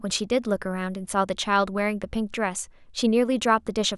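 No technical faults can be heard anywhere in the recording.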